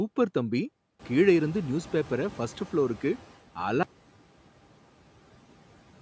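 At 0.99 s the background noise jumps by about 17 dB, around the one-second mark. The noise suppressor is caught out. Its noise estimate still reflects the quieter room, so the louder noise passes through with little reduction. Over the next 2.34 s the estimate catches up. The noise then sinks by about 9 dB, settling by 3.33 s. This is the noise suppressor catching up. It sounds like a wash of noise that slowly fades back.

At 3.83 s the audio drops out to silence and stays silent to the end. The cut is abrupt, mid-flow. Nothing remains in the gap, not even room tone. That points to lost input, likely a disconnected device, failed link or mute, with silence written in its place. Whatever followed is gone. Before the cut, the call microphone processing shows its normal band limit, with nothing above 8 kHz.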